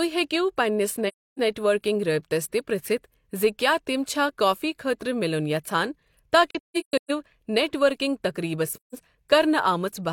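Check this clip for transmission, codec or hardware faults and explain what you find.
The speech has AAC frame loss with muting in three places: 1.08 to 1.39 s, 6.50 to 7.10 s (several short gaps, the longest around 150 ms), and 8.73 to 8.96 s. The decoder zeroes the missing frames' spectrum, and the overlapping windows fade the sound out and back in, so each dropout is a soft hole. A spectrogram shows blank vertical bands with tapered edges, and the waveform shows smooth dips to silence.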